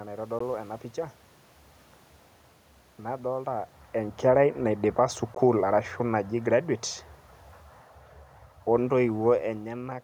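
Speech, with two brief holes at 0.39 s and 5.35 s where roughly 14.5 ms of sound vanishes and resumes as if it had played on, which fits a single lost packet each time, so the likely cause is a Bluetooth dropout rather than a pause in speaking. From 3.94 s to 6.69 s the automatic gain is falling, pulling the level down by about 5 dB. Unlike the talker moving, which happens around 3.5 s and 9.5 s and only changes the voice, here the room noise sinks along with the speech.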